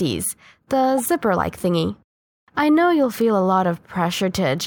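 At 0.98 to 1.06 s the speech is interrupted by a corrupt frame decoded: damaged bits in the compressed stream were played as if valid, misplacing energy across the spectrum. It sounds like a fairly loud chirp, squeak or noise burst lasting about 90 ms, consistent with several consecutive damaged frames.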